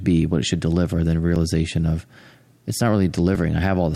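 Just after "it should deliver then", a skip at 1.36 to 1.39 s: overlap between stream segments made the player cut 26 ms of sound.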